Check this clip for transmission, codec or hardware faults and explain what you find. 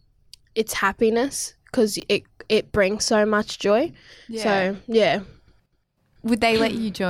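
One transmission fault is present: a brief run of chunks out of order in the speech, from 2.00 to 2.03 s, between "it's happiness because" and "it it brings so". Here a 10 ms chunk arrived or was written two chunks late, so it plays after the two chunks that should follow it. No audio is missing, but the 30 ms stretch is shuffled, creating three hard joins. It sounds like a tiny jumbled stutter. Unlike a dropout or packet loss, there is no gap or fill, only the wrong order.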